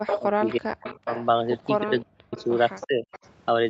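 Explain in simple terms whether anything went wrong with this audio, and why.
Two kinds of fault are audible. An echo leak runs from 0.06 to 1.24 s and again from 1.99 to 3.29 s: a copy of the speech returns about 325 ms late, fairly loud at first and much fainter later, likely because a loudspeaker's echo canceller let it through.

Speech suppressed in double talk appears from 0.19 to 1.09 s, 1.81 to 2.36 s, and more mildly 2.86 to 3.05 s. The talker's speech drops sharply or cuts out in pieces, likely because the echo canceller mistook it for echo while both sides spoke.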